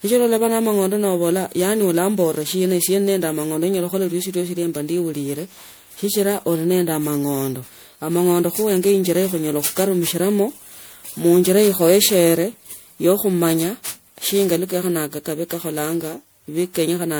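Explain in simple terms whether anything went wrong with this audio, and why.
Something did go wrong, and it runs through the whole recording. The speech has a swirly, watery quality, with a hollow sound and consonant onsets that smear instead of snapping cleanly. This is generation loss, likely from the audio being saved in the MP3 format over and over, around ten times. Each save throws away a little detail in a slightly different place, and the damage piles up. A single poor-quality save would mostly sound dull or muffled. Here the very high treble is still present, reaching to roughly 21 kHz, yet the sound is still hollow and smeared. That combination points to repeated copying rather than one bad save.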